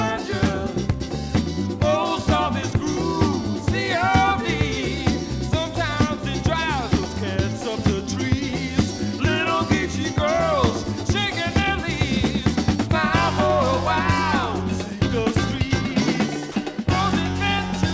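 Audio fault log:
16.52–16.56 s, sound dropped by the voice detector: a 40 ms gap where the sound is swapped for flat, steady noise before carrying on. The sender's detector likely read that moment as background and stopped sending, so the receiver filled in comfort noise.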